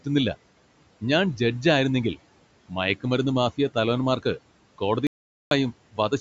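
A short speech clip, call-processed so nothing sits above 8 kHz, with room noise about 20 dB under the talker, and it has two problems near the end. First, an audio dropout to silence from 5.07 to 5.51 s: the sound stops dead mid-flow and the gap is silent, with no room tone at all. About 0.44 s of speech is simply gone. That silent gap most likely means the input itself was lost, through a device or link dropping out or a brief mute, while the recorder kept writing silence. Then, from 5.92 to 6.12 s, there's speech cut by the noise suppressor: the suppressor mistook part of the talker for background and pulled it down, by about 16 dB at its deepest, over roughly a tenth of a second in total. Those bits come across swallowed and faint rather than missing outright.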